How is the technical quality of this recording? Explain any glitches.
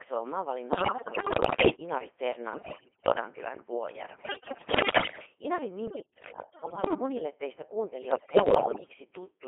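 The technical quality is poor. The whole recording has passed through a very low-rate vocoder, and five bursts of channel errors garble it further.

Codec 2 vocoder: Throughout, the speech sounds robotic and buzzy, confined to roughly 300 Hz to 3.5 kHz, with heavy codec damage that fits a 2.4 kbit/s mode. The decoder rebuilds the voice from sine waves using only pitch, voicing, energy and a coarse spectral envelope, so the original waveform never arrives.

Bit errors on digital voice radio: Bursts occur at 0.70–1.76 s, 2.54–3.12 s, 4.20–5.26 s, 5.88–6.94 s and 8.12–8.94 s. Flipped bits corrupt the frame parameters, so the synthetic voice lurches in pitch, loudness and tone colour, breaking into bleeps, warbles and gibberish. The error rate is high in every burst, peaking near one bit in five in the first and lightest, around one in ten, at 5.88 s. Packet loss instead leaves gaps or repeats, whereas these bursts produce wrong but continuous sound.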